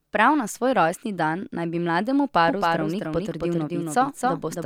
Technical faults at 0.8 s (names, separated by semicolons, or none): none